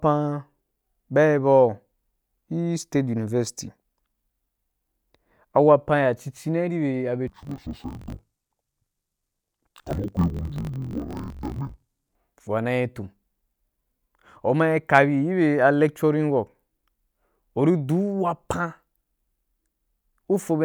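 Interleaved audio read as planar affects this speech clip from 7.28 to 12.16 s, ending just before "wa na yi tum". Each 21.77 ms block of alternating left and right samples is split in half, with the first half taken as left and the second as right, so both channels play their material at half speed within each block. The voice drops an octave (−12 semitones) and sounds doubled and choppy, with a buzz at the 45.9 Hz block rate.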